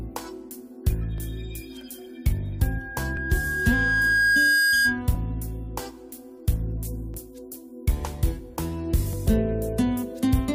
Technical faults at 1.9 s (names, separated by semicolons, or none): none